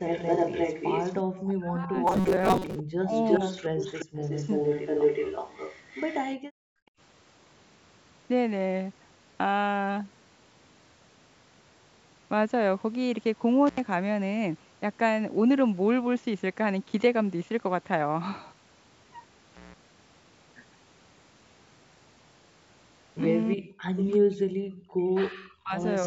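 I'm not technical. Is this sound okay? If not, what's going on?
No. This speech recording has several problems typical of a phone or video call.

From the start to about 6.2 s, you can hear an echo leak: a second, delayed copy of the voice trailing roughly a third of a second behind, about as loud as the original. A fainter echo returns briefly from 23.97 to 24.09 s, lagging about 0.4 s. The likely cause is that one side had the call on a loudspeaker, and the software meant to cancel that loudspeaker sound from the microphone let some of it through and back down the line.

There are also moments of speech suppressed in double talk. The voice drops away sharply from 1.46 to 1.96 s, dips briefly from 3.01 to 3.12 s, and fades in and out in pieces between 23.54 and 25.78 s. This likely happened because both sides spoke at once, and the echo canceller, unable to separate the talker from the loudspeaker echo, turned everything down.

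From 2.07 to 2.76 s, the voice turns into a stiff, metallic buzz with a fixed low hum of 188 Hz, while still roughly following the speech. This robotic sound from repeated short buffers likely comes from new audio arriving too slowly. The software filled the gaps by repeating tiny slices, so about half of what you hear there is repeats.

The background gated by the echo canceller shows up at 6.37 to 6.99 s and again at 24.72 to 24.88 s. The room sound behind the voice suddenly goes nearly silent, then comes back. This happens because the canceller clamped the microphone down hard while the loudspeaker was playing.

Finally, there are two brief dropouts with crackly edges from an intermittent contact. The first is at 13.67 s and lasts under a tenth of a second. The second, at 19.54 s, lasts about 0.16 s. A loose cable or plug briefly lost its connection, cutting the sound until it reconnected.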